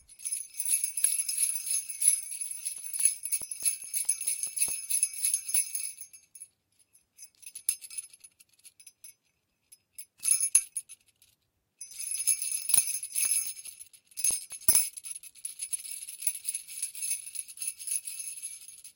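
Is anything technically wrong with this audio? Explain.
Yes. CD scratch ticks appear twice, from 2.78 to 4.69 s and again from 13.25 to 14.94 s. A scratch or blemish on the disc wipes out more data than error correction can rebuild, and it passes the laser once per revolution. Each time, the player fills in or mutes the damaged samples for a few milliseconds. Each burst is a regular train of about five ticks per second, of uneven strength.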